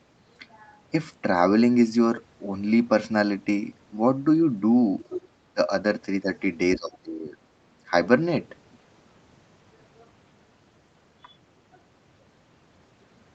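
From 5.01 to 5.28 s, the echo canceller likely failed to fully remove the loudspeaker signal from the microphone, so the other side's voice is leaking through. It is a brief second voice roughly 10 dB under the talker.

Speech is suppressed in double talk at 5.53 to 5.6 s, 6.22 to 6.28 s, 6.76 to 7.36 s and 7.89 to 7.93 s, likely because the canceller mistook the talker for echo while both sides spoke. The voice dips by around 20 dB at the first and third points, nearly cutting out for about half a second at the third. At the other two it dips more gently, by around 5 dB.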